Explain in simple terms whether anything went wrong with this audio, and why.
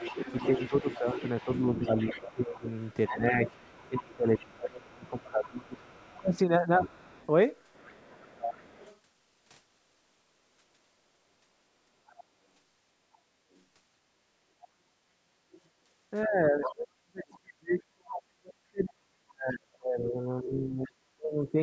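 The call's echo canceller likely failed to remove all of the other side, which was playing from the talker's loudspeaker. The result is other side's voice leaking through: a second voice, present over the first nine seconds (0.0 to 8.97 s), then in brief scraps at 13.13 to 13.61 s, 15.52 to 15.60 s, 16.23 to 16.72 s and 20.86 to 20.91 s.

When both people talked at once, the canceller likely could not tell the talker from the echo and turned everything down. This is speech suppressed in double talk. The main voice sinks sharply and breaks up, for about three seconds in total between 0.57 and 6.37 s, and for about five seconds between 16.26 and 21.58 s, where it nearly disappears.

The background was gated by the echo canceller from 15.06 to 15.28 s. While the loudspeaker played, the canceller clamped the microphone, so the room sound dips for about a fifth of a second before returning.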